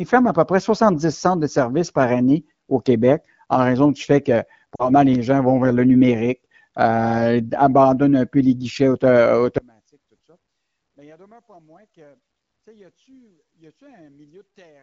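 A speech clip with two faults. Lost AMR speech frames at 4.76 to 4.90 s, between "raison du fait que" and "les gens vont vers", make the sound smear and fade, consistent with two lost frames of about 40 ms. On a spectrogram this appears as a brief blurred, fading patch. From 9.58 s to the end, the level drops by about 35 dB when the channels are summed to mono, leaving only a faint residue. The likely cause is one channel inverted. On a waveform this shows as a sudden collapse in mono amplitude. The wideband coding itself, consistent with AMR-WB at around 15.85 kbit/s, sounds only lightly coloured.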